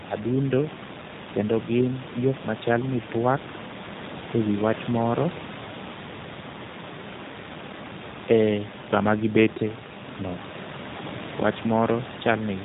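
G.729 codec damage runs throughout: speech rebuilt at about 8 kbit/s from a vocal tract model and sparse pulses, losing everything above 4 kHz, sounds rough and synthetic, with the room noise about 14 dB below warbling.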